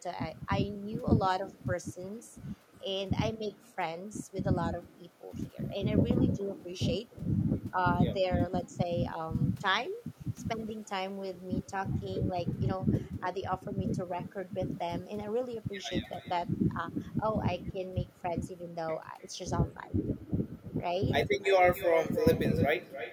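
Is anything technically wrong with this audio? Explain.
Yes. The speech carries an echo with no canceller, and it runs through the whole clip. Every phrase returns roughly a third of a second later, sitting about 13 dB below the original. At the far end the call plays on a loudspeaker. The microphone there picks it up and sends it back, and nothing cancels it. The returning copy sounds quieter and thinner, like a shadow trailing each utterance.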